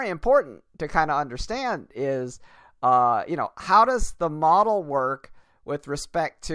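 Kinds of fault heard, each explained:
No kinds of fault are heard in this speech.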